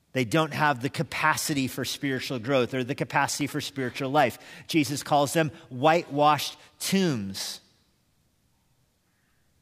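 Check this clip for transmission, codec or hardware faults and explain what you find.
There's one fault here, a short patch of processor overload crackle from 3.12 to 3.41 s in the speech. For about 0.3 s the machine couldn't finish its very short audio buffers on time, which suggests blocks of roughly a millisecond and a half. A handful of those deadlines slipped in a row, and each miss dropped out to silence with a hard edge. Strung together, those tiny holes give a gritty, tearing crackle over the speech that stops as soon as the load eases.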